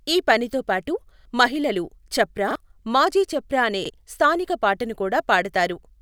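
A repeated buffer occurs at 1.21, 2.51 and 3.85 s. Late-arriving audio made the device replay the previous 46 ms block once, fitting a 2048-sample buffer, heard as a brief stutter with hard joins.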